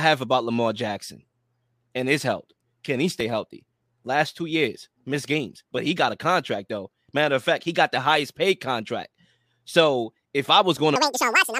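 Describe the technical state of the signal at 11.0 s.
Audio read two samples at a time (double speed) runs from 10.96 s to 11.59 s, the end of the clip. Each pair of samples is taken as one frame, so the speech plays at 2.0x speed, an octave higher.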